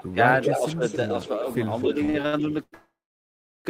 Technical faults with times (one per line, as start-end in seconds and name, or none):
0.00-0.09 echo leak
0.10-0.18 speech suppressed in double talk
0.43-1.29 echo leak
0.48-0.84 speech suppressed in double talk
1.78-1.90 echo leak
2.05-2.74 repeated stalls (stutter)
2.74-3.67 call audio freeze